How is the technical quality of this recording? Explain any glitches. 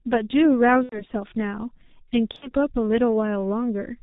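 The quality is poor. The whole clip carries G.723.1 codec damage, and it has two dropouts.

The G.723.1 codec is heard throughout. The sound is muffled and hoarse, with nothing above 4 kHz and smeared consonants, which fits a rate of about 6 kbit/s.

VoIP packet loss concealed by the speech codec occurs at 0.83 to 1.04 s and 2.36 to 2.53 s. The decoder stretched its last frame into a fading buzzy tone or coloured noise, fitting about three and two lost 30 ms frames.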